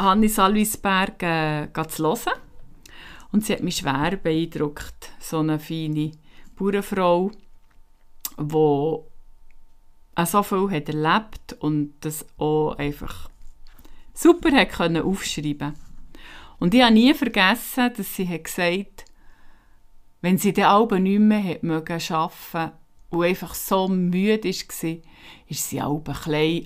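Speech, with no technical faults to report anywhere in the recording. Nothing in the sound points to a problem in capture, processing or playback.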